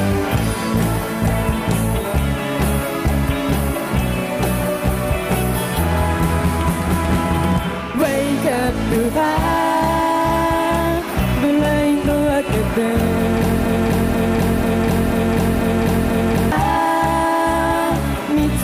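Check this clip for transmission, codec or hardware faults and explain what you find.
One fault stands out: a broken-record loop from 13.65 s to 16.52 s. A fragment of about 0.49 s plays six times in a row, each repeat identical and butted straight against the next, so the sound stutters mechanically instead of moving forward. Whatever should have filled those seconds never arrives. The likely cause is a player, encoder or stream that stalled and kept re-sending the last chunk it was holding until fresh data resumed.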